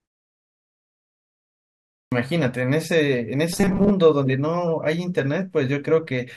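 After 1.63 s of silence, the speech resumes with a clipped start after a pause: roughly the first 0.49 s of sound, up to 2.12 s, never reaches the output because the device was still waking or relocking after sleeping through the quiet. The phrase starts abruptly out of silence without its first sounds. On a waveform the flat line jumps straight to speech level at 2.12 s with no onset ramp, and a spectrogram shows energy appearing abruptly across all frequencies.

From 3.53 to 3.91 s the speech turns into a rigid, metallic buzz locked at 200 Hz that still roughly tracks the syllables. The likely cause is robotic sound from repeated short buffers: audio arrived too seldom, and about half of this stretch was filled by looping the last 5 ms chunk, which fits a very small buffer, while real speech was skipped. A spectrogram shows evenly spaced horizontal harmonics at multiples of 200 Hz replacing the natural gliding pitch. 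The waveform shows identical 5 ms cycles repeating back to back.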